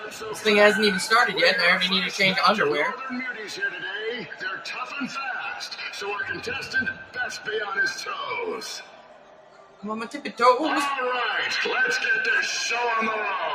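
A noise suppressor made for speech runs on this sound from start to finish, treating held and steady material as noise and turning it down by varying amounts, so the level swings by about 10 dB as the suppressor's gain moves.

Sound cut by the noise suppressor occurs at 0.0–0.46 s, 2.92–3.09 s, 3.29–3.88 s, 4.23–4.71 s, 5.54–5.78 s, 6.94–7.17 s and 8.78–9.83 s. In each, sustained or fading sound sinks by about 5 to 9 dB, most deeply near 6.9 s and 9 s, with the longest dip lasting roughly a second.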